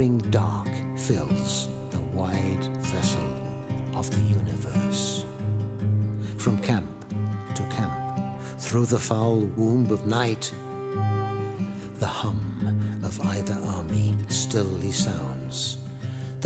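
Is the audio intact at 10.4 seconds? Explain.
Yes, the audio is intact at 10.4 seconds, with nothing there beyond the ordinary call processing, whose bandwidth tops out around 8 kHz.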